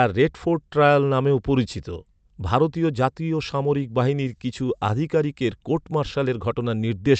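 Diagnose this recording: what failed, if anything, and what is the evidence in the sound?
A network-stage fault: a short stall from a late packet, in the jitter buffer. From 4.67 to 4.70 s, just before "আধিকারিকের কোর্ট", the speech holds a sound about 16 ms too long. A packet arrived late. The receiver stretched the last audio, then resumed where it stopped, losing nothing.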